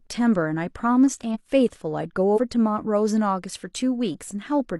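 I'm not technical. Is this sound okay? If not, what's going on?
No. This is compressed frames skipped: chunks of the compressed audio were lost or rejected as damaged, so playback jumps forward. Around 1.30 to 1.36 s roughly a tenth of a second of speech vanishes, and around 2.28 to 2.39 s about half that.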